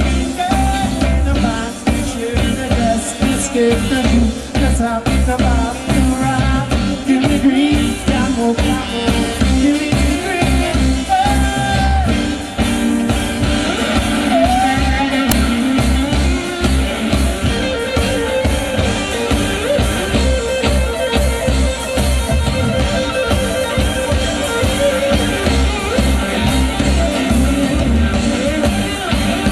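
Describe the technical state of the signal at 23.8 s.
At 23.8 s the signal is intact, with no audible dropout, distortion, glitch or other technical fault at that moment.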